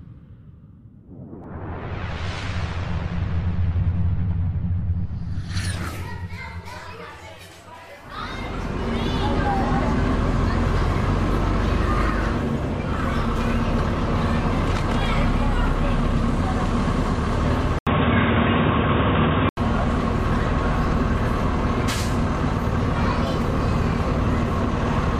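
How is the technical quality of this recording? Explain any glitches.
One glitch stands out. Input switched to a poorer device, 17.79 to 19.57 s: after a gap of about 80 ms, the sound turns dull and boxy, with nothing above 3.8 kHz and new background noise roughly 30 dB down, while loudness stays about the same. This likely comes from recording switching to a narrower-band microphone or headset profile.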